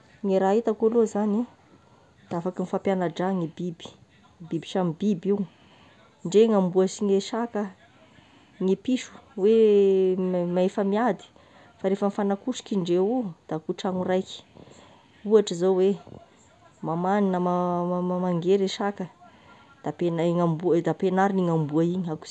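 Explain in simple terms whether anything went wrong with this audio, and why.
Nothing went wrong here: the speech recording comes through as a steady, unbroken signal with no technical faults to be heard anywhere in it.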